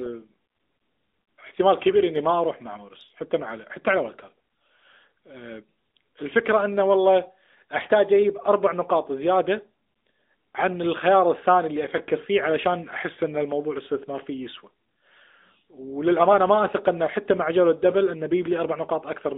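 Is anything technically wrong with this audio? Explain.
Yes. Throughout, plainly audible AMR narrowband mobile codec damage limits the speech to 250 Hz to 3.7 kHz. Its pulse-driven vocal tract model, which fits a 10.2 kbps mode, sounds synthetic.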